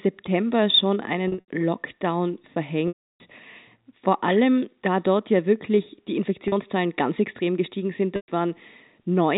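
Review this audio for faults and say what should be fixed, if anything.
Buzzy, held tones at 1.28–1.48 s and 6.48–6.52 s (after "dort ja wirklich die"), with a fade into silence at 2.88–3.20 s and 8.16–8.28 s (after "ganz extrem gestiegen sind"). This is packet loss with pitch repetition: the receiver loops the last pitch period over each gap. Within the 320 ms loss, the loop fades out over about 50 ms. Adding forward error correction or redundant packets and a larger jitter buffer on the network path would prevent it.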